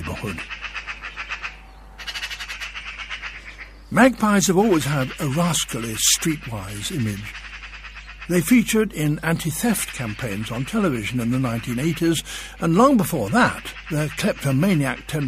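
Mains hum at 50 Hz runs through the whole audio, about 20 dB below the signal. Unlike broadband rumble, it is a fixed, pitched tone, pointing to a ground loop or nearby transformer.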